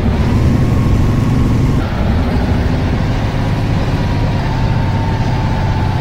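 At 1.79 s, compressed frames are skipped. The audio jumps ahead by about half a second. That fits a run of around twenty frames of roughly 23 ms each being dropped or rejected.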